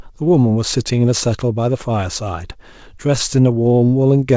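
A speech clip whose pace sounds faintly uneven, with small stretching hiccups recurring at irregular intervals from 0.14 s to 4.32 s, so the delivery drags slightly at about 98% of its proper speed. These are repeated timing corrections: the receiver keeps inserting short repeated fragments, roughly a tenth of a second in total, to fill gaps. The underlying cause is clock drift between sender and receiver. The sender's clock runs about 3% slow, so the jitter buffer keeps draining and must be topped up again and again throughout the clip. All of this plays out over a WebRTC call path whose G.722 coding at 64 kbps leaves nothing above 8 kHz.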